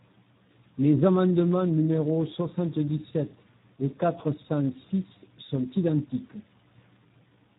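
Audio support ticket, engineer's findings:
Speech throughout: hoarse, noisy texture. Component: Speex codec, low quality mode, consistent with about 8 kbps narrowband. Mechanism: CELP excitation starved of bits, so the pitch and noise structure of the voice is crudely approximated. Band-limited: no content above 3.8 kHz, giving a muffled, telephone-like top end. Damage heavy across the entire clip, not intermittent.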